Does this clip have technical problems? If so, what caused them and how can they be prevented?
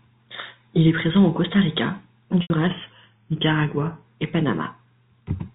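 Yes. From 2.42 to 2.50 s there is packet loss with pitch repetition: about 80 ms of audio went missing, which fits four 20 ms packets, and the receiver filled the gap by repeating the last pitch period, so the speech briefly turns into a held, buzzy tone. Unlike a click, the sound freezes on one pitch. A jitter buffer with forward error correction or redundant packets would prevent it.

From 2.67 to 4.04 s the speech slows by about 6% and its pitch drops by about 110 cents, a little over a semitone, before snapping back to normal. Speed and pitch move together, which separates this from a pitch-shifting effect or a singer going flat, and the abrupt start and end separate it from gradual tape-style wow. The likely cause is a drift correction step, where clock-matching software changed the playback rate in one jump to manage its buffer. Correcting drift in small, continuous rate adjustments would prevent it.

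The G.711 telephone coding limits the sound to the telephone band, and any quantisation noise from it is faint.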